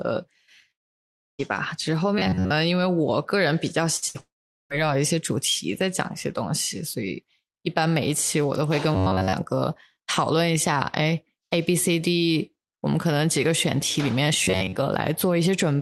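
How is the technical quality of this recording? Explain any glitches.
The audio has a cluster of network glitches, carried over an Opus call path with its usual coding noise and top end stopping around 12 kHz.

A long network dropout hits from 0.71 to 1.41 s and again from 4.20 to 4.72 s. Audio likely stopped arriving, so after a brief fading tail you hear silence, and roughly 0.7 s and 0.5 s of speech are lost.

Robotic sound from repeated short buffers shows up at 2.18–2.50 s, 8.95–9.33 s and 14.44–14.77 s. This is likely starved buffers looping about 10.7 ms chunks, which gives a metallic 93.8 Hz buzz over most of the speech.

Bursts of packet loss at 3.97 s and 4.08 s each drop about 60 ms. The gap gets papered over with a quick fading continuation of the last sound, and the speech then jumps ahead.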